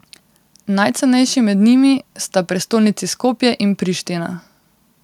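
Listening to the speech recording, nothing technical stood out.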